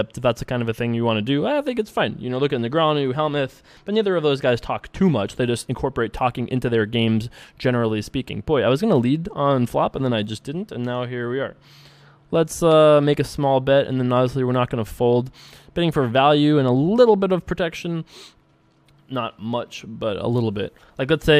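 Nothing goes wrong anywhere in this audio, so there's no fault to point to at any moment.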